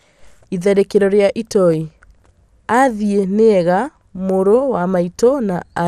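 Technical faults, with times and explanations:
Throughout, MP2 compression: speech is dull and gurglingly granular as upper sub-bands flicker off, unlike a steady low-pass, likely from bit-starved Layer II coding, fitting 80 kbps.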